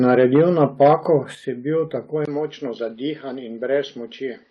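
At 0.36 s the speech level drops suddenly by about 3 dB. At 1.35 s it drops again, by about 7 dB, just before "si bil". Voice and background fall together, in single steps. This is most likely a microphone volume stepped down by the call software. It judged the input too loud and lowered the device's gain. The level is not ramped. Each step is instant, so the quieter speech simply continues from a lower level.

At 2.25 s there is a short gap of about 20 ms. After it, the speech sounds duller and boxier through to the end. The top of the band is gone. A new noise floor appears, roughly 40 dB below the speech. The overall level stays about the same. This is likely an input switched to a poorer device, such as a second microphone or a headset's call profile.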